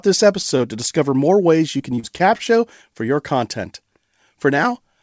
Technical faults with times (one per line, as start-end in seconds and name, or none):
0.57-0.64 short stall from a late packet
1.77-2.41 repeated packet loss (robotic sound)